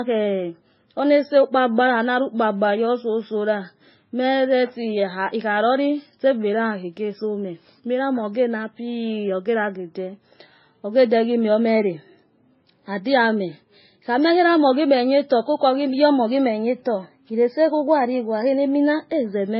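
Throughout the speech, the top end is missing above 5.6 kHz, giving a dull, boxed-in tone, and two kinds of coding damage sit on top of each other, heard together. The likely cause is transcoding between lossy codecs. The sound points to a very low-rate MP3 stage, around 17 kbit/s, later re-encoded as AAC-LC at about 32 kbit/s. The second encoder spent its bits preserving the first codec's artefacts and added its own, while the lowest cut-off in the chain carried through.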